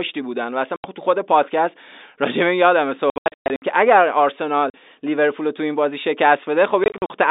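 Telephone speech, carried as G.711 A-law with a band of about 250 Hz to 3.7 kHz. It has packet loss filled with silence. The sound drops out fully from 0.76 to 0.84 s and from 4.7 to 4.74 s. Between 3.1 and 3.62 s, gaps totalling 380 ms are scattered, the longest 120 ms. From 6.84 to 7.1 s, gaps total 140 ms, none longer than 40 ms. All gaps are multiples of 20 ms, which fits 20 ms packets replaced by silence.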